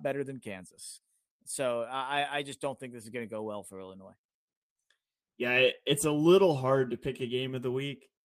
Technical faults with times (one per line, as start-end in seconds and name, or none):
none